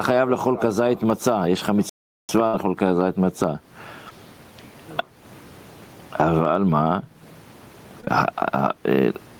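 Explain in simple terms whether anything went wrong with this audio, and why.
Throughout there's gain pumping: loud and soft parts end up closer in level and the sound is squashed, likely from the level being set too high with a fast limiter clamping down.

From 1.89 to 2.29 s the sound just stops for about 0.4 seconds. That's a playback stall, likely the player running out of data before carrying on.

Just after, at 2.47 to 2.55 s, there's a burst of packet loss. The last sound gets stretched and fades out, then the speech jumps ahead with a small piece missing.

Short concealed packet loss causes brief smears or wobbles at 4.09 to 4.13 s and again at 8.01 to 8.09 s, where the receiver patched over tiny holes.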